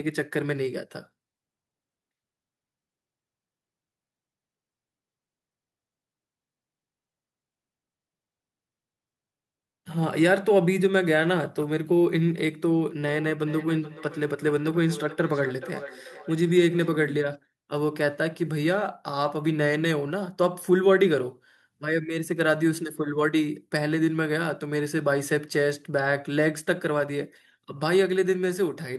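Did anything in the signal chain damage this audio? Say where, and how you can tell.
Yes. From 13.0 to 17.0 s, speech recurs roughly every 0.4 s, thinning each pass, about 17 dB down. This is feedback echo between two devices whose cancellers ignore each other's playback.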